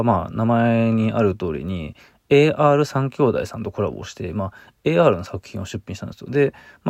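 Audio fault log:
No audible faults in this speech recording.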